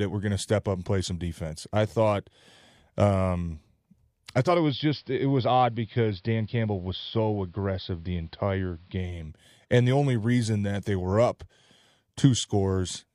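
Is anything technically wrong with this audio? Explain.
Yes. From 4.23 to 9.34 s the digital radio is blending to analogue: a 388 ms cross-fade to AM cuts the treble, drops the level about 1 dB and adds faint hiss, starting just before "and the only reason".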